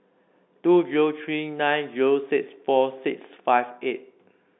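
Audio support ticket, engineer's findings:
Nothing stood out on listening to this speech clip, heard through the expected narrow telephone band of G.711 coding.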